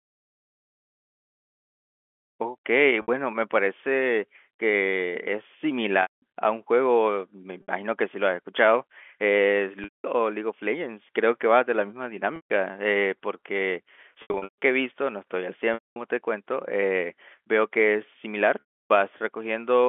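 Packet loss with pitch repetition breaks the speech eight times. The gaps fall at 3.02–3.08 s, 6.02–6.22 s, 7.62–7.68 s, 9.84–10.04 s, 12.36–12.50 s, 14.22–14.58 s, 15.74–15.96 s and 18.60–18.89 s. The lost spans run from 60 ms to 300 ms, which fits 20 ms packets. At 14.22 s the 300 ms of loss is scattered over 400 ms, with a longest run of 140 ms. To fill each gap, the receiver repeats the last pitch period. The 60 ms losses sound like a brief buzzy hold. The longer ones fade to silence before the speech cross-fades back. All of this sits within the narrow 250–3400 Hz telephone band of the G.711 line.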